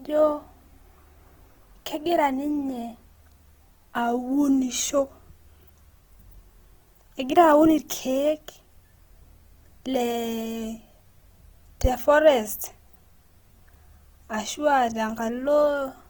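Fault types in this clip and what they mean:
Opus compression: The speech has a plainly audible coding roughness from start to end. It sounds grainy and noisy rather than swirly or watery. Voiced sounds lose their clean tone and turn rough. The top end still reaches about 20.2 kHz, so the band is not narrowed. This is likely Opus in its music (CELT) mode at a rate around 16 kbps. Short of bits, it keeps each band's energy but fills the detail with folded copies or noise.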